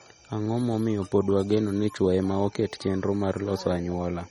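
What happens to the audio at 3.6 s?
At 3.6 s you're hearing the same thing that runs through the whole clip: MP3 compression, likely at a low bitrate, with damage that fits something around 32 kbps. The encoder is starved of bits, so it chops everything above about 12.9 kHz and drops quieter frequency lines, which flicker in and out frame to frame. That gives the speech a watery, swirly texture, with metallic chirp on the s sounds and softened consonant attacks.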